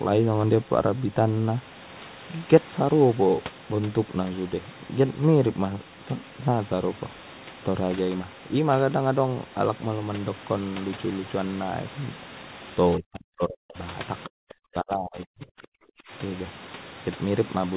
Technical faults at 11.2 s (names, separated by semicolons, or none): none